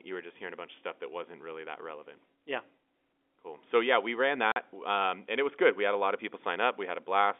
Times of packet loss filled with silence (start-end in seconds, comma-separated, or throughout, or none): 4.52-4.56